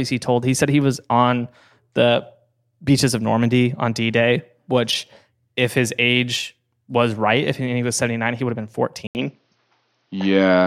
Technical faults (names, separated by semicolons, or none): input switched to a poorer device